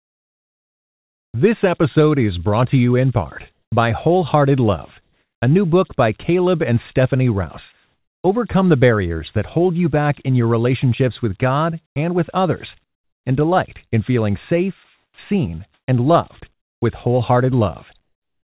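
A faint steady whistle around 7 kHz, about 29 dB below the speech, runs throughout. These are converter idle tones from an undithered delta-sigma converter settling into repeating bit patterns. The whistle still shows even though the call path's narrowband coding, which fits G.711 A-law, leaves nothing else above 4 kHz.

From 0.0 to 1.34 s the background turns into smooth, featureless hiss, about 36 dB quieter than the real room. The same flat hiss returns at 3.52 to 5.42 s, 7.72 to 8.24 s (about 1 dB louder there), 11.86 to 13.26 s, and from 14.84 s to the end. This is comfort noise in place of the background, likely because the sender stopped transmitting during pauses.

At 15.14 to 15.18 s the speech starts abruptly, missing its first 40 ms. This onset clipped by the voice detector likely happened because the detector reacted late, so that opening was never sent.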